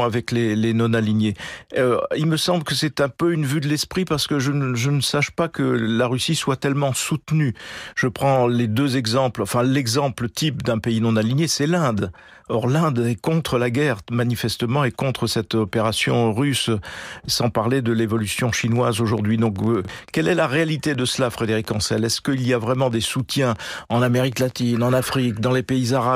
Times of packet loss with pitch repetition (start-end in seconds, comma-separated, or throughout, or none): none